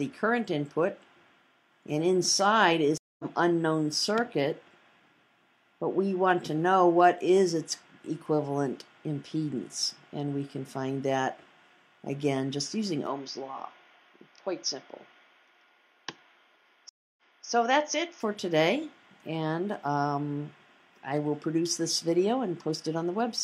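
A stream reconnect at 2.98 to 3.25 s cuts the audio out for 215 ms. The connection dropped and the player restarted its decoder mid-stream, so playback picks up roughly a fifth of a second further on, skipping material rather than pausing it, and the first frame back fades in.

From 13.07 to 18.21 s the sound turns duller and boxier with no gap and no real jump in level. Nothing reaches above 6.6 kHz, and a new noise floor sits roughly 50 dB under the signal. This is likely an input switched to a poorer device, a narrower-band microphone or headset profile with its own tone and hiss, before the fuller sound returns.

Inside that stretch, a second stream reconnect at 16.89 to 17.45 s goes silent for 281 ms and then resumes 279 ms earlier, so the moment just before the dropout is heard twice as the server resends its buffered burst.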